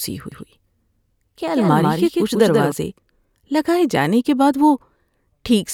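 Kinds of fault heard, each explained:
Doubled audio track: from 0.32 s to 2.72 s the speech is shadowed by a dry, full-band copy trailing about 150 ms behind and roughly 5 dB quieter, starting and stopping abruptly. The likely cause is a second, slower capture path mixed in.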